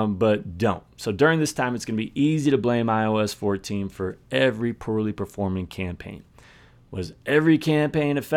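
No technical faults can be heard anywhere in the recording.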